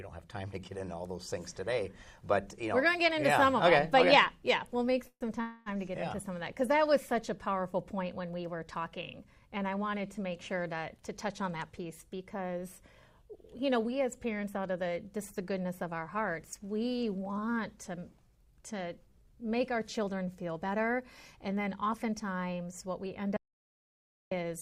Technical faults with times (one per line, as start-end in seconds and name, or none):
5.07-5.69 call audio freeze
11.02-12.81 jitter buffer speed-up
13.23-14.83 jitter buffer speed-up
21.46-22.31 jitter buffer speed-up
23.37-24.31 audio dropout to silence